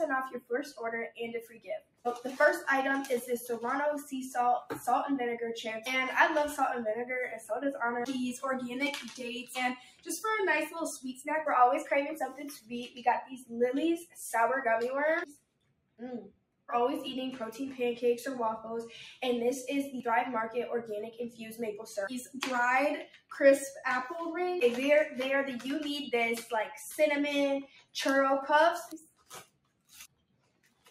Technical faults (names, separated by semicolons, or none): noise suppressor applied to music or sounds; sound cut by the noise suppressor